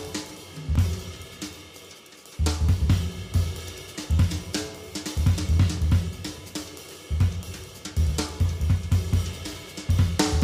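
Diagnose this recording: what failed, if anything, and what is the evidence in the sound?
Looks like a driver or buffer problem: there's a block of digital silence at about 0.76 s, roughly 2.9 ms long, which fits a 128-sample buffer going out empty. The sound drops straight to silence and back with no fade, so you hear it as a tick or dip.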